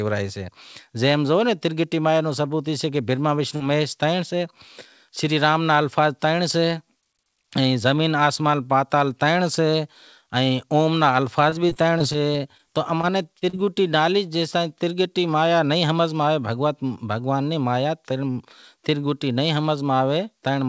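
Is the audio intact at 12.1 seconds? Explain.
No. 12.1 s falls inside repeated packet loss (robotic sound) from 11.50 to 12.61 s, just after "اوم را". Short gaps of up to 19 ms keep recurring, and each is patched by extending the preceding sound, giving choppy, robotic speech with fragments missing.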